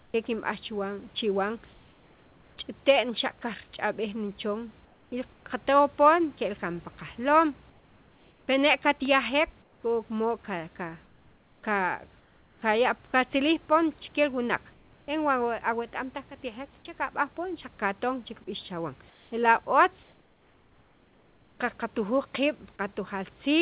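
The sender's voice detector likely halted transmission during pauses, so the receiver filled them with comfort noise in place of the background at 0.00–0.14, 1.73–2.57, 4.85–5.45, 7.70–8.48, 9.62–9.83, 14.72–15.08 and 19.10–21.59 s. The room's real hiss gives way to a flat, featureless noise, up to about 9 dB quieter. From 11.06 to 13.13 s, the detector likely switched on and off repeatedly, and the speech is chopped by the voice detector. Quiet edges, about a second of sound in total, are replaced by synthetic fill within a band that stops at 4 kHz.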